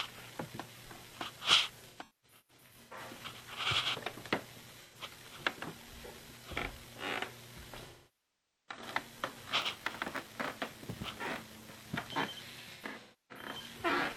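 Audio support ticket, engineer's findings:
AAC frame loss with concealment at 1.88–2.98 s (about 640 ms lost, scattered, longest run roughly 0.2 s), 4.83–4.95 s (85 ms), 7.86–8.82 s (811 ms) and 12.61–13.53 s (555 ms, longest run roughly 0.3 s). Smeared, noisy, phasey patches. Longer runs decay toward silence, then fade back. Decoder resynthesising missing frames from the last good spectrum.

Block size mismatch (padded) at 9.61–11.93 s. Steady 93.8 Hz buzz, with the audio running slow at 0.938× but near normal pitch. A zero-filled gap closes each block. This fits an upstream stage writing about 480-sample blocks into a stage reading 512 samples.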